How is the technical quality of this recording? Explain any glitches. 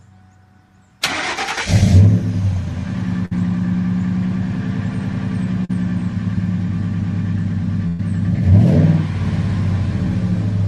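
The recording has three dropouts that break its continuity, two of them longer and one brief.

Burst of packet loss, at 3.25 to 3.33 s and 7.87 to 8.01 s: the sound stalls into a held buzz or fading hiss, then jumps ahead. Consecutive packets arrived too late or not at all. The receiver stretched the last audio for about 55 ms and 117 ms, skipping roughly 60 ms and 120 ms of the original.

Short concealed packet loss, at 5.65 to 5.71 s: a brief smear or wobble, where a short sound may drop out. About 40 ms never reached the decoder in time. It was patched by continuing the preceding sound, then blended back into the real audio.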